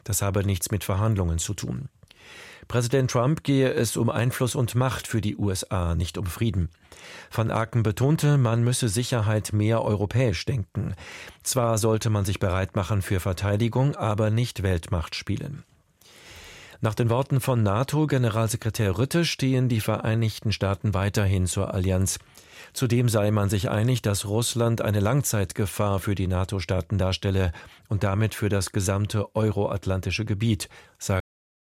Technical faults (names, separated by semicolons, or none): cut-off end